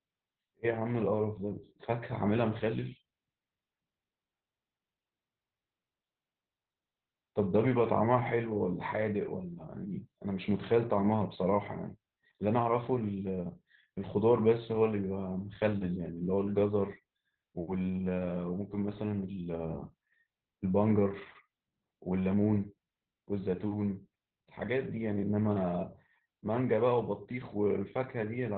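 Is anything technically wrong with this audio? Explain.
Yes. Throughout, Opus voice compression in narrowband SILK mode cuts everything above 4.3 kHz and coarsely codes the excitation, consistent with roughly 8 kbps. The speech sounds muffled and hoarse-robotic, not just dull as with a plain low-pass filter.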